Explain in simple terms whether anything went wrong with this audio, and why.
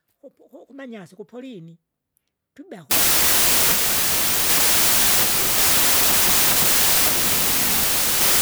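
Something clearly breaks at 2.91 s and stays broken to the end. From there the speech turns into loud, harsh noise with the real sound faintly buried underneath, running about 1.33 times too fast and pitched up. That's a wrong sample width fault. The audio was stored in one size of chunk but read back in another, which fits 24-bit samples being read as 32-bit ones. So most values are stitched from mismatched pieces, and only fragments of the original get through.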